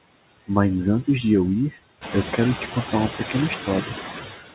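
Noise suppressor artifacts run through the whole clip. The suppressor cuts steady background noise by about 19 dB, band by band, frame by frame. The noise dips in pauses and swells back under the speech, most clearly once the room noise rises around 2 s.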